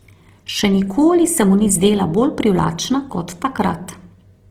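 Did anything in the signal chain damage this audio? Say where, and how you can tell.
Yes. Opus compression runs throughout the speech, at the codec stage. The sound is grainy and rough, with noise filling the upper bands instead of dropping out, and the full bandwidth is kept. That points to the likely cause: Opus in music mode, starved at around 16 kbps.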